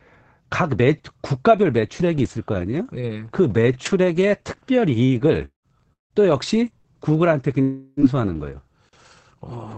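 Speech carried over what sounds like an Opus call path, with the audio band ending around 8 kHz and coding noise consistent with a bitrate near 20 kbps. Repeated packet loss (robotic sound) runs from 5.05 to 6.87 s. Four separate holes open in the stream, the longest 177 ms, and about a quarter of that span is concealed. The decoder fills each hole by stretching the last sound, about 435 ms in total, and around a tenth of a second is recovered from later data. About 420 ms of the original speech is gone, which leaves the passage choppy. From 7.62 to 8.00 s, 360 ms of speech is missing, and in its place is a sustained, fading buzz or hiss lasting about 351 ms that never drops to silence. This is likely a long network dropout: nothing arrived for that stretch, and the receiver kept extending the last sound until audio resumed. Lost packets rebuilt from error correction follow at 7.97, 8.33 and 8.87 s, each about 60 ms long. 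In each case the next packet carried a coarse, low-bitrate copy of the missing one, so no gap opens. Those brief moments sound rougher and noisier than the speech around them.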